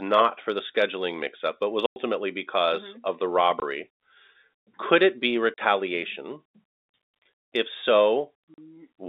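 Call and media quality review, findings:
Speech chopped by abrupt drops to dead silence, each hole with hard edges: 1.86 s (100 ms), 3.6 s (20 ms), 5.54 s (40 ms), 8.54 s (40 ms). Probable component: network path into the receiver's playout. Mechanism: packet loss filled with silence. Missing packets are replaced by zeros with no concealment, so the waveform cuts hard. All gap lengths are multiples of 20 ms, which fits 20 ms packets. The G.711 telephone band is audible throughout.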